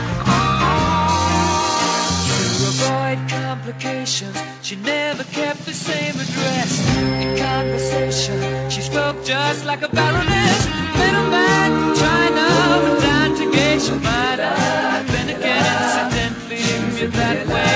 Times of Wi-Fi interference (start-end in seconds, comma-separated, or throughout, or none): none